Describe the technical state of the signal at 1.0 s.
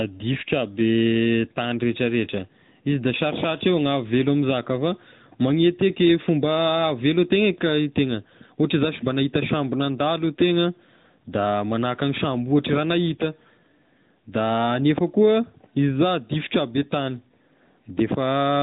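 At 1.0 s, as across the whole clip, the speech passes through the AMR narrowband mobile codec. A spectrogram shows a hard ceiling at 4 kHz, and the pulse-driven vocal-tract model leaves a plainly buzzy, synthetic edge, consistent with a mode near 10 kbps.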